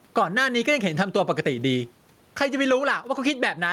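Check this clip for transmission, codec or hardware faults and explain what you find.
One fault runs through the whole clip: gain pumping. The input gain is likely set far too high, so a fast limiter pulls the level down by about 15 dB on every loud sound. Loud and soft parts end up closer in level, and the sound is squashed. On the waveform, the peaks look flattened and evenly squashed. On the spectrogram, the noise floor rises and falls in step with each loud sound.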